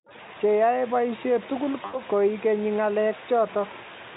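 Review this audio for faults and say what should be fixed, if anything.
VoIP packet loss concealed by the speech codec, 1.85 to 2.01 s: 80 ms went missing, and the decoder extrapolated it into a fading buzzy tone or coloured noise, visible as smeared, decaying energy. Adding forward error correction or redundant packets, with an adequate jitter buffer, would prevent it.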